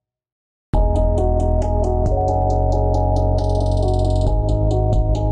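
Channels drifting apart runs throughout. The two channels' clocks disagree slightly, so their offset creeps to a fraction of a millisecond, giving slow flanging when summed to mono.

Clock slip clicks run from 0.13 to 5.26 s, a rattle of faint ticks roughly every 70 ms, likely from unsynchronised clocks dropping or repeating single samples.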